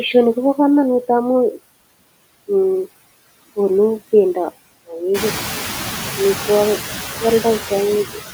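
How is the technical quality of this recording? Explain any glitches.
Noise suppressor artifacts run throughout: background noise ducks between phrases and swells back under the speech, because the suppressor cuts noise-dominated bands by about 16 dB frame by frame. The room's own noise, which climbs by about 14 dB around 5 s to sit about 9 dB below the speech, belongs to the recording itself.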